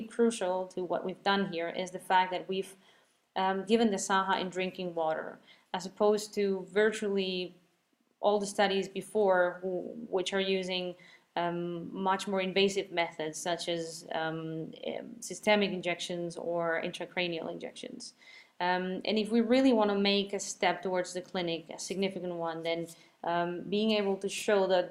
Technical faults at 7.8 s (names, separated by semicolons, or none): none